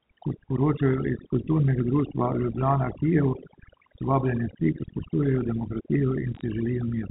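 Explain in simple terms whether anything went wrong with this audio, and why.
Two things went wrong. The first runs through the whole clip: overdone noise removal. A noise reduction tool was set too aggressively, so it shut off individual frequency bands whenever they came close to what it took to be background noise. Quieter parts of the speech were removed along with the noise. The pauses fall to near silence with faint twinkling specks.

The second is brief, from about 6.35 to 6.41 seconds: bit errors on a digital phone line. The speech travels over a standard telephone connection that carries everything above 4 kHz away, but within that window a small share of the transmitted bits, roughly one in five hundred, were flipped. Each flipped bit corrupts a single sample, and where it hits an important bit it produces a sharp tick. Together they form a short burst of crackle layered over the speech.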